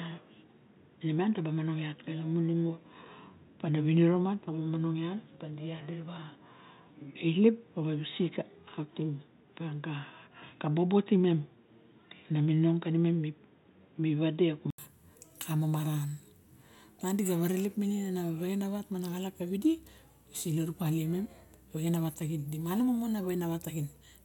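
A speech recording whose first 14.78 s sound boxy and dull, with nothing above 3.8 kHz, before the sound opens out to full bandwidth after a short gap of about 80 ms. This points to an input switched to a poorer device, likely a headset call profile or second microphone, then back. A plain low-pass filter or codec bandwidth cap wouldn't bring the silence at the switch, or the separate faint background noise sitting well below the speech, while the level stays much the same.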